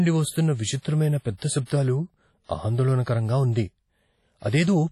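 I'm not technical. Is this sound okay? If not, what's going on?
No. From start to finish the speech sounds ringing and washy, with a hiss that swells and fades along with the talking, and the top end stops at 14.5 kHz. That's likely heavy WMA compression, which shrank the file by smearing and discarding fine detail.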